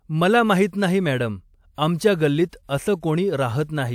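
Pre-echo appears twice: after "मला माहित नाही मॅडम" at 1.75 to 1.78 s, and after "माहित नाही मॅडम आमच्या" at 2.49 to 2.53 s. The transform coder spread noise meant for a sharp onset back across the quiet gap, leaving a 35 to 40 ms hiss that dulls each attack.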